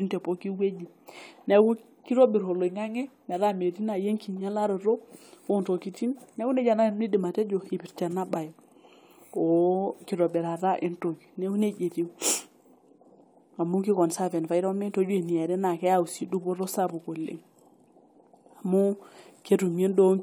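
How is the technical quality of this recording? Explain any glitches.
Nothing stood out as a technical problem on listening, so there are no glitches to explain.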